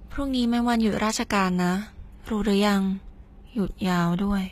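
Right through the speech there's plainly audible HE-AAC compression damage, likely from a low-bitrate encode around 20 kbps. The treble is rebuilt from copied lower bands rather than coded, so s sounds come out gritty and metallic, and nothing reaches above about 14.9 kHz.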